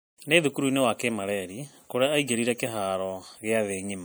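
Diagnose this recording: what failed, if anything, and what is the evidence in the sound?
The speech sounds watery and swirly from start to finish, with the s sounds turning metallic and chirpy and consonant attacks smeared rather than crisp. That points to the codec stage, most likely MP3 compression at a bitrate around 64 kbps. With too few bits, the encoder drops weaker frequency lines, which flicker in and out between frames and leave that plainly audible swirl.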